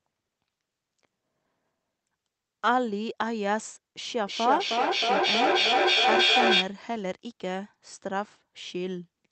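From 4.23 to 6.84 s, feedback echo between two devices: sound returns roughly every third of a second, thinner and more ringing each pass. Unlike a single room or line echo, the repeats build up, peaking about 6 dB above the speech, because the loop crosses devices that no single echo canceller covers.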